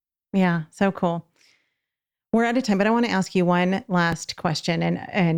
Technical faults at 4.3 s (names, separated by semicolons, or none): processor overload crackle